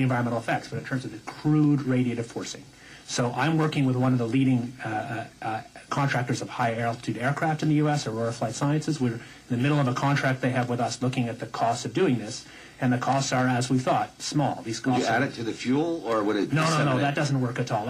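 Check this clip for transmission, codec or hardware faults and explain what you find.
No faults are audible.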